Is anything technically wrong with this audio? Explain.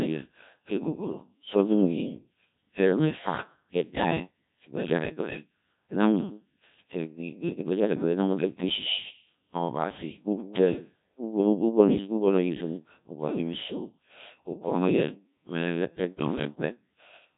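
Yes. Throughout, the speech has passed through a Codec 2 vocoder. The damage is heavy and fits its 1.3 kbit/s mode, and nothing survives above 3.8 kHz. Because only pitch, voicing and envelope are sent, the decoder rebuilds it from sine waves, leaving it robotic and buzzy.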